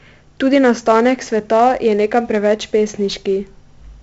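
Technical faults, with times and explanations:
Throughout, 4-bit ADPCM compression: heavy gritty hiss that rises and falls with the speech, unlike steady background noise. Nothing above 7.7 kHz fits a 64 kbps stream.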